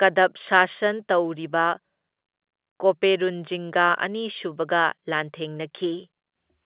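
Listening through the speech, carried on an ordinary G.711 telephone line, nothing stood out.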